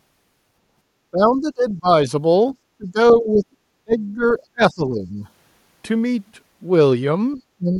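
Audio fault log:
1.11–1.88 s, 2.74–3.56 s, 3.84–4.23 s, 4.53–5.25 s, 7.35–7.40 s and 7.58–7.79 s: speech suppressed in double talk. Most likely the echo canceller mistook overlapping far-end sound for its own echo and clamped the outgoing path. The speech sinks in pieces, roughly 20 to 30 dB at its deepest through the middle stretch, only a slight dip around 7.4 s, then the voice pulls back up each time the clamp releases.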